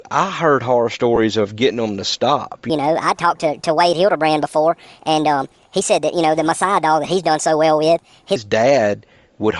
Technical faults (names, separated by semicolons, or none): Bluetooth LC3 compression; lost LE Audio frames; section at the wrong speed